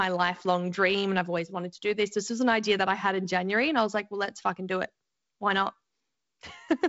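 No technical faults are audible.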